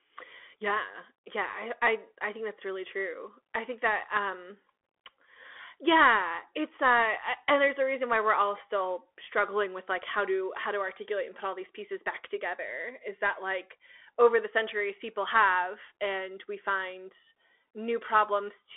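Throughout, a Bluetooth CVSD headset codec's one-bit slope coding leaves scratchy s sounds and granular hiss, and the spectrogram is empty above 3.8 kHz.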